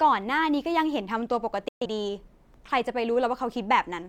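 At 1.68 s the receiver stopped getting valid digital frames, a digital broadcast dropout, and muted until clean frames returned at 1.86 s. The speech fades out in about 3 ms to a silent hole, consistent with roughly three lost frames, then resumes partway along.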